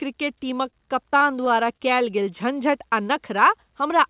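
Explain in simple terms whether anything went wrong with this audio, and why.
Between 0.7 and 1.81 s the speech turns choppy, with tiny pieces dropping out. This is repeated packet loss (robotic sound): six small chunks of audio, the longest about 24 ms, never arrived in time, and each hole was patched by stretching the sound just before it.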